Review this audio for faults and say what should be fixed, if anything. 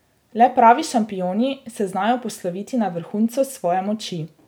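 Nothing needs fixing; no faults were heard.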